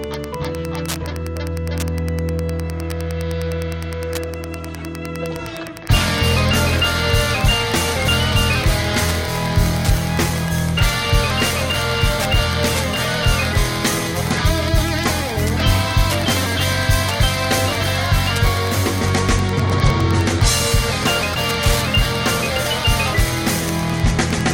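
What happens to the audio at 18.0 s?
At 18.0 s the audio carries Wi-Fi interference, which runs through the whole clip rather than starting at that moment. A nearby Wi-Fi radio's beacon, repeating every 102.4 ms, is being picked up and rectified by the audio circuit, so a steady ticking of about ten clicks a second sits roughly 20 dB below the sound. On a spectrogram it shows as evenly spaced thin vertical lines spanning a wide band; the waveform shows small, regular spikes.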